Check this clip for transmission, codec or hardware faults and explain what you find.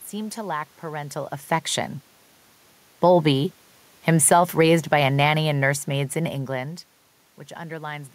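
There's one hardware-side fault here, an automatic gain falling episode. From 4.08 s to 6.51 s the level drifts down by about 4 dB. The gain control judged the input too hot or its background noise too strong and eased its gain back gradually, so the speech and the room noise behind it sink together rather than the voice alone fading. That's the tell that separates it from the talker shifting position around 1 s and again near 6 s, where only the voice changes level.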